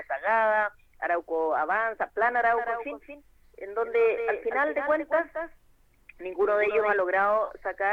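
A doubled audio track spans 2.52–6.96 s: a quieter, dry copy trails about a fifth of a second behind, likely from a slower second capture path.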